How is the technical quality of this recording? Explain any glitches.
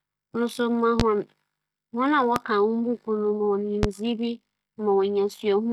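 The recording is marred by three loud pops. Each loud pop, at 1.00–1.03 s, 2.36–2.40 s and 3.83–3.87 s just before "me mo", is a single sharp click, roughly 20 dB above the speech, which carries on underneath. It is likely a sudden voltage pulse from a plug, switch, static or driver glitch.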